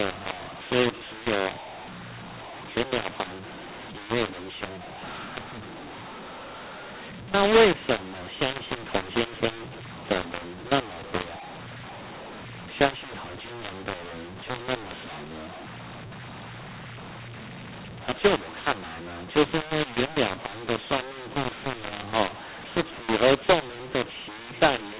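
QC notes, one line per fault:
Throughout: mu-law and A-law mixed up. Mu-law-coded speech is decoded as A-law, scrambling levels. Unlike clipping, harshness persists at low levels and pauses fill with noise.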